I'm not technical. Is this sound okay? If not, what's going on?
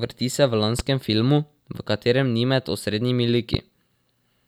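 No. This speech clip has two loud pops, one at 0.79 to 0.82 s and one at 3.54 to 3.57 s. Each is a single sharp click, clearly louder than the voice, and the speech carries on underneath without a break. The likely cause is a brief electrical jolt, such as a plug moving, a switch, a static discharge or a glitch in the audio hardware. That jolt gets added to the recording as a quick burst of noise.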